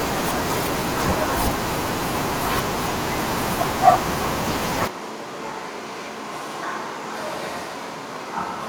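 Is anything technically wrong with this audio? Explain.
Yes. At 4.88 s the speech cuts suddenly to a distant microphone and stays there to the end. The close microphone's feed likely dropped out. The sound turns roomy and hollow, with less bass. It falls about 10 dB. Room noise sits about 25 dB below the speech.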